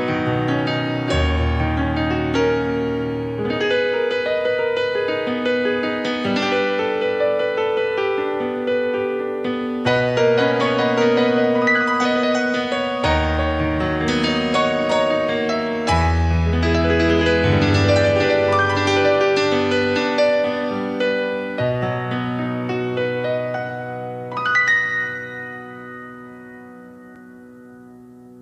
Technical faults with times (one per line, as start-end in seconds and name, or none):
27.15 block of digital silence